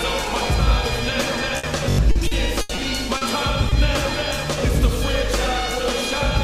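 The audio stutters three times, at 0.47–0.49 s, 1.90–1.98 s and 4.29–4.31 s: a piece of roughly 21 ms replays with a hard join, once at the first and last points and four times in a row at 1.90 s. These are repeated buffers. New audio arrived late, so the device replayed its last block, which fits a 1024-sample buffer. Each single repeat loses about 20 ms of audio, and the longer one about a tenth of a second. At 1.57–1.65 s the last sound is held and fades before the audio jumps ahead. This is a burst of packet loss: about 60 ms never arrived, and the receiver stretched the last sound to cover the hole. From 2.11 to 2.79 s the sound turns choppy, with four separate holes totalling 180 ms and the longest 80 ms, so about a quarter of that stretch is patched rather than real. This is repeated packet loss. Brief smears at 3.17–3.23 s and 3.69–3.73 s, lasting 40 ms and 20 ms, are short concealed packet loss, where the decoder extended the last sound across the gap and blended back in.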